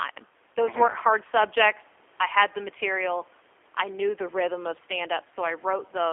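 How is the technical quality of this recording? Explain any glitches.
The recording is clearly degraded by a G.729 codec, and the damage is plainly audible. Room noise sits about 34 dB below the speech.

The G.729 codec affects the whole clip. It rebuilds speech from a vocal tract model and sparse pulses, and the sound fits an 8 kbit/s G.729A stream. Everything sits between about 300 Hz and 3.4 kHz, so the speech comes across thin, rough and synthetic.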